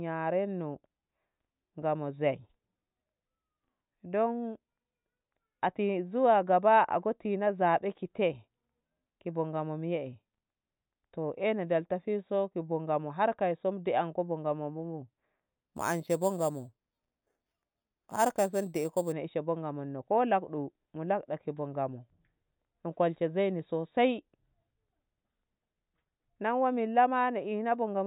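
Imaging from sample-and-hold upsampling runs from 15.65 to 19.12 s, ending just before "nei she bo". The speech was raised from an 8 kHz rate to 44.1 kHz by simply repeating each sample, with no smoothing filter to remove the mirrored spectrum. The first image fills the band from 4 kHz to 8 kHz at about 17 dB below the speech, heard as a bright metallic fizz that rises and falls with the talker and slides opposite to the pitch.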